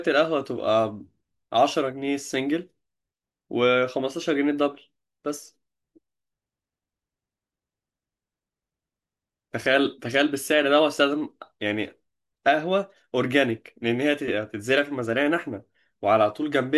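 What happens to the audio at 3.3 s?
Nothing goes wrong at 3.3 s; the speech plays through that moment intact, with no dropout, click, glitch or other fault.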